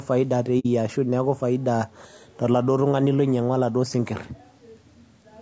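Throughout the clip the speech sounds rough and grainy, with noise filling the gaps between harmonics. This is likely low-delay AAC compression, consistent with AAC-ELD at around 32 kbps. On a spectrogram, the harmonic lines look smeared and hazy beneath the call processing's 8 kHz ceiling.

From 0.59 to 0.66 s there is AAC frame loss with muting. Two frames were lost and the decoder silenced them, so the sound fades out and back in, leaving a soft-edged hole. The waveform tapers to flat silence, and the spectrogram shows a blank vertical gap.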